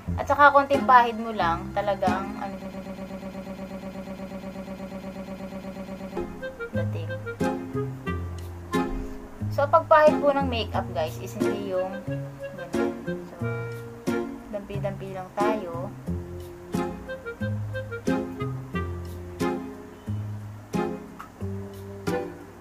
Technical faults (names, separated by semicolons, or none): broken-record loop